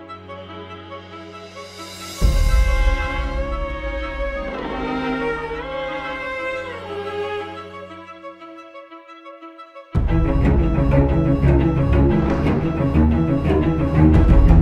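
Nothing stood out on listening to the audio.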